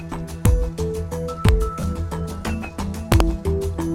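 Integer overflow at 0.46 s and 1.49 s: peaks reaching the top of the integer range wrap to the opposite sign instead of being limited, giving sharp, violent cracks far harsher than clipping.

Lost LE Audio frames from 1.80 to 1.83 s: a 30 ms gap, which fits three lost LC3 frames, is filled by repeating the last spectrum with randomised signs, so the sound briefly blurs into a noisy smear.

Integer overflow again from 3.12 to 3.20 s: loud peaks about 1 dB over the limit repeatedly flip across the full range, producing a burst of harsh cracking over those 80 ms.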